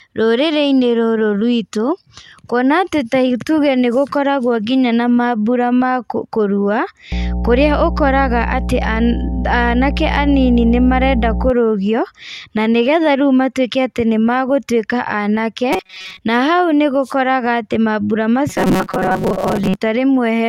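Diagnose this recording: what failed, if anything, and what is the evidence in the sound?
A steady, loud 60 Hz drone sits under the speech from 7.12 to 11.50 s, strong enough to sit close to the speech level. This mains hum points to the analogue wiring: a ground loop or nearby transformer is leaking the power line into the signal path.

From 15.73 to 16.19 s and again from 18.50 to 19.75 s, the speech turns into a rigid, metallic buzz locked at 188 Hz while still loosely tracking the syllables. This robotic sound from repeated short buffers likely comes from the driver or buffer stage. Audio arrived late, so a chunk of about 5.3 ms was looped in place of real sound. That replaced most of the first stretch and about half of the second.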